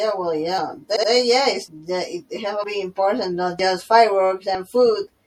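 The whole clip sounds watery and swirly. Sibilants chirp and smear. This is likely MP3 compression, with weak frequency lines dropping in and out between frames. The damage is plainly audible, which fits a low bitrate around 64 kbps.

At 0.95 s the sound stutters. Repeated frames replay a 72 ms block two extra times, ending at 1.09 s. The clip grows 144 ms longer, which fits a run of three compressed frames being duplicated.

Then come brief skips at 1.68, 2.64, 3.59 and 4.55 s, each a short jump. The one at 2.64 s falls between "have to" and "be important". Each loses a few tens of milliseconds. The steady spacing of about one second points to audio missing between chunks, likely at recording-block handovers.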